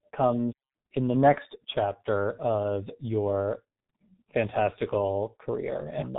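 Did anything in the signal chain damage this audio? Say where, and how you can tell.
Yes, it's the codec: G.723.1 throughout. Nothing above 3.8 kHz, with hoarse, muffled speech and smeared consonants, which fits heavy coding at around 6 kbit/s.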